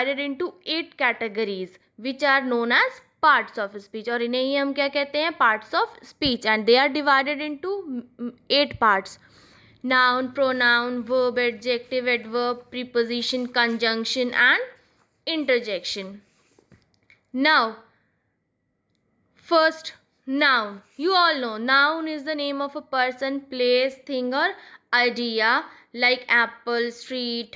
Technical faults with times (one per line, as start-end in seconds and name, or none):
none